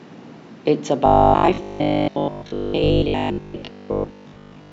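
A speech clip in which, from 1.06 s to the end at 4.72 s, new audio likely stopped arriving in time, so the playback kept repeating a 20 ms buffer for most of the stretch. This robotic sound from repeated short buffers imposes a fixed 50 Hz buzz, turning the voice metallic and rigid.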